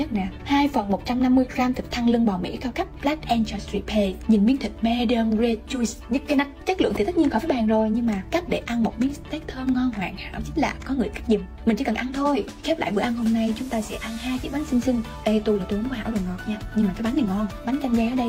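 Nothing here sounds off at any point; there's no glitch, dropout or other technical fault to pick out anywhere in the recording.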